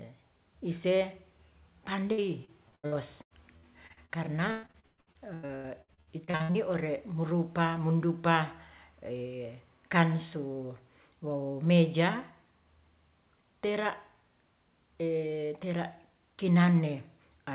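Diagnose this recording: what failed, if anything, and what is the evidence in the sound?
The network failed. Repeated packet loss gives choppy, robotic sound from 2.12 to 4.12 s and from 4.51 to 6.58 s. Gaps up to 116 ms are filled by extending the last sound. That covers about a quarter, then nearly half, of each stretch.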